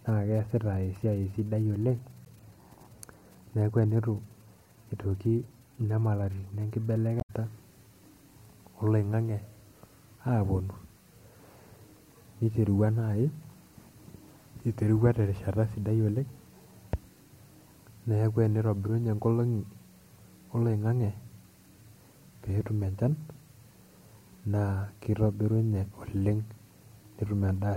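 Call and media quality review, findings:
Short glitch in speech at 2.25–2.29 s, just after "sidai oleng", and a longer blip at 7.17–7.30 s. Damaged data in a compressed stream: corrupted frames misread by the decoder, which loses sync and hunts for the next frame header.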